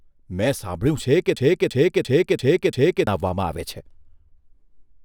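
From 1.37 to 3.07 s the speech hits a system hang loop. The driver froze while the hardware replayed one 341 ms buffer, which fits 16384 samples, five times. The result is a 2.93 Hz machine-gun stutter, with identical repeating blocks on the waveform and spectrogram.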